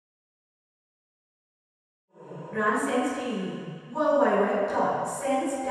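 No technical faults are audible; the level simply rises in a gentle fade-in from around 2 s that is complete by 2.72 s, with no click or hard edge.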